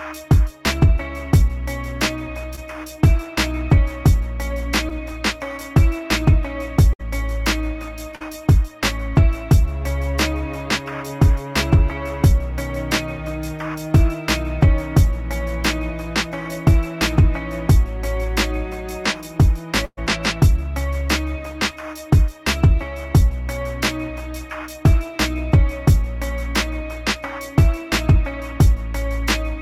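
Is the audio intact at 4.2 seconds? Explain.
Yes, at 4.2 s the audio is intact, with no dropout, click, distortion or other fault at that moment.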